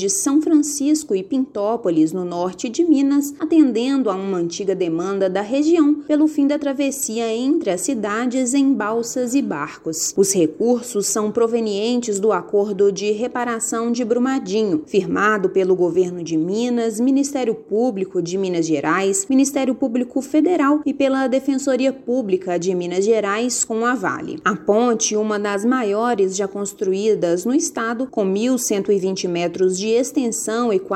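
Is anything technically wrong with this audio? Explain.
Yes. Clock slip clicks, 0.16 to 30.93 s: faint ticks about ten per second, likely from unsynchronised clocks roughly 200 ppm apart slipping single samples.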